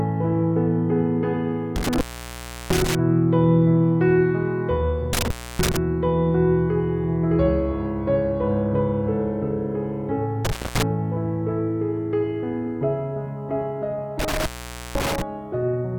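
Four bursts of intermittent contact, where a loose cable or plug briefly loses connection, occur at 1.76 to 2.95 s (open about 0.70 s), 5.13 to 5.77 s (0.29 s), 10.45 to 10.83 s (0.24 s) and 14.19 to 15.22 s (0.50 s). Each dropout is bracketed by crackle and leaves faint hiss. On a waveform the signal collapses to a thin noise floor. A spectrogram shows bright vertical click lines at each edge around a near-empty band.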